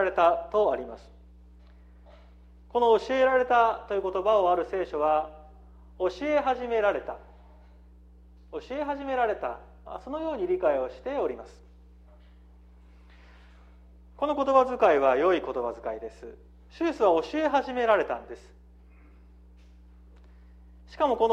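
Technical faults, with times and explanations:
Throughout, mains hum: a ground loop or nearby transformer couples the 60 Hz power line into the signal, adding a steady low tone, about 25 dB below the audio.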